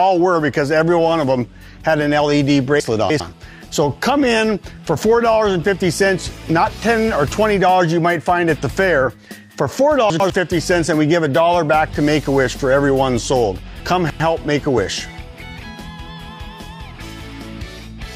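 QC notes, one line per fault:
2.8–3.2 s, 10.1–10.3 s and 13.8–14.2 s, chunks out of order: in each span a 100 ms block of audio plays late, after the blocks that should follow it. It is three blocks late at 2.8 and 13.8 s and one block late at 10.1 s. The sound jumbles briefly, with three hard joins in each span. Unlike a dropout or a repeat, no audio is missing and none plays twice. It is only reordered.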